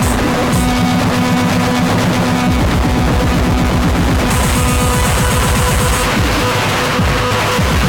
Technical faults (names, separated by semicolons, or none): none